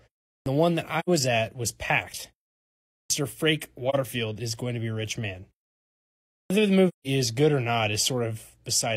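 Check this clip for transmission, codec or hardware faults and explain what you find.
Two faults recur in this speech clip: clipped starts after pauses and AAC frame loss with muting.

Clipped start after a pause: At 0.35, 3.00 and 6.40 s, after pauses of 0.35, 0.75 and 0.96 s, roughly 0.1 s of onset is missing. The output device slept through the silence and was still waking when speech resumed. Words begin abruptly. The waveform shows an instant rise with no attack.

AAC frame loss with muting: Gaps at 0.99 to 1.09 s (85 ms), 3.89 to 3.95 s (43 ms) and 6.88 to 7.07 s (171 ms) fit the loss of two, one and four AAC frames. The decoder zeroed the spectrum, and overlapping windows faded the sound smoothly out and back in. The spectrogram shows soft-edged vertical blank bands.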